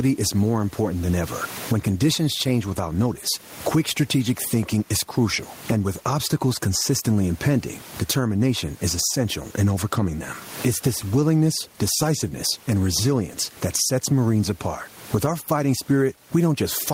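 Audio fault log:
throughout, gain pumping: the gain ducks by around 20 dB under loud speech, squashing loud and soft parts closer in level, with the room background about 37 dB below the speech, likely from excessive gain feeding a fast limiter.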